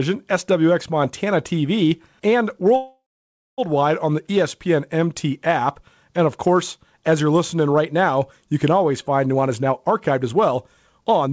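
From 2.76 to 3.60 s the speech halts in a call audio freeze: the last sound trails off as a fading buzz or hiss, then about 0.57 s of silence. Delayed packets likely emptied the jitter buffer. Unlike a dropout, the speech resumes where it stopped, with nothing missing, only 0.82 s of added delay.

After "you can always find", from 9.34 to 10.57 s, a jitter buffer speed-up plays the speech at 123% speed, trimming roughly a third of a second. It recurs at 10.99 to 11.32 s at 143% speed, removing roughly 150 ms. Pitch stays unchanged, which separates it from a faster playback rate. The speech sounds hurried. Through the G.722 call path, nothing above 8 kHz is heard.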